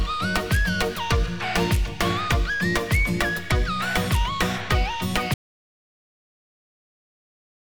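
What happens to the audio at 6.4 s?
At 6.4 s you're in an audio dropout to silence: from 5.34 s to the end the sound cuts to silence, no room tone at all, likely a lost input link.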